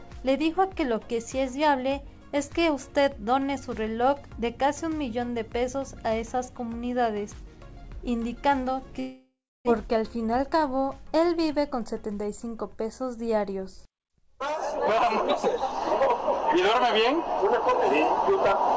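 At 9.00 s the sound cuts out, and what you hear until about 9.69 s points to a long network dropout as the likely cause. Nothing new arrived, so the receiver kept stretching the last bit of sound into a fading buzz, and for around 290 ms near the end there's just silence. When audio returns, roughly 600 ms of material is gone, so it picks up further along rather than where it left off.

Right after that, from 9.83 to 10.73 s, there's a jitter buffer speed-up. Once the connection came back, the buffer was holding more than it wanted, so the receiver trimmed tiny pitch-period-sized slivers over and over to catch up, about 50 ms in total. Playback runs at roughly 105% with the pitch unchanged, so that stretch sounds a little rushed. Throughout, the G.722 call path leaves nothing above 8 kHz.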